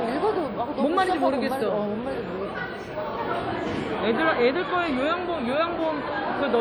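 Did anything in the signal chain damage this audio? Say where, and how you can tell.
Yes. The damage comes from the codec stage and runs through the whole clip. Transients ring, decays turn washy, and a hiss rises and falls with the signal's level. The damage is plainly audible. The band stops near 19.8 kHz. This is likely WMA compression at a rate that fits about 48 kbps. The transform's long blocks spread quantisation noise over tens of milliseconds around each event, and weak spectral lines drop out.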